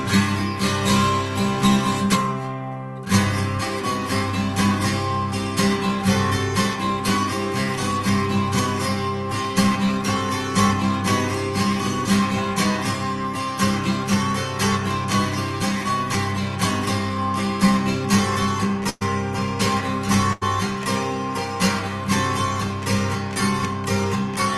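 Burst of packet loss at 18.89 to 19.03 s and 20.33 to 20.43 s: consecutive packets were lost or came too late, so the receiver stretched and faded the last sound over the holes, skipping about 120 ms and 80 ms.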